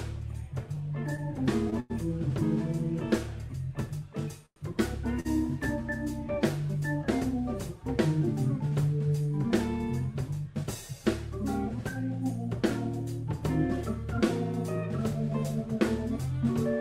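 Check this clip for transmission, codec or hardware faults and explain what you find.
Four kinds of network fault can be heard, all from packet timing rather than the codec or hardware: a stutter, a freeze, a brief stall, and two hurried stretches.

Between 0.75 and 1.92 s the sound drags and stutters, catching four times. Each catch holds the last sound, and the longest, at 98 ms, audibly fades. These are repeated stalls (stutter). Packets kept arriving later than they were played, so the jitter buffer emptied four times and the receiver filled 143 ms, about 12% of that span, by continuing the previous sound. Nothing is lost, but the flow is broken up.

At 4.46 to 4.58 s the sound freezes into a short fading buzz that drops to silence for about 70 ms before carrying on where it stopped. This is a call audio freeze, and the likely cause is packets held up in transit that left the jitter buffer empty. 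The receiver bridged 104 ms with a decaying continuation, inserting a gap while dropping nothing.

At 5.20 s one sound is held slightly too long, with a faint buzzy dip lasting 48 ms. This is a short stall from a late packet. A single packet missed its playout time, so the receiver stretched the preceding sound until it arrived and then resumed from the same point. Nothing is missing, and the timing shifts back by that 48 ms.

From 10.47 to 10.83 s and again from 15.69 to 16.43 s the sound runs hurried at an unchanged pitch, at about 110% and then 107% of normal speed. This is a jitter buffer speed-up. The buffer held more audio than its target, so the receiver repeatedly cut pitch-period-sized slices to reduce the delay. That removed roughly 50 ms in the first stretch and roughly 70 ms in the second.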